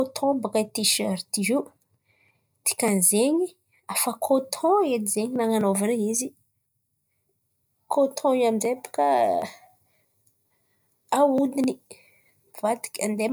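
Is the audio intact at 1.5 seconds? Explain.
Yes, the audio at 1.5 seconds is intact, with no dropout, click, distortion or other fault at that point in the speech.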